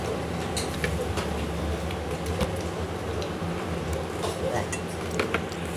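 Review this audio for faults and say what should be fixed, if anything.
Wrong sample rate throughout: the sound runs about 1.45 times fast and sits 6.45 semitones high, which fits 22 kHz material played at 32 kHz. On a spectrogram, everything is stretched upward and squeezed in time. Prevent it by reading the file's true rate and resampling before playback.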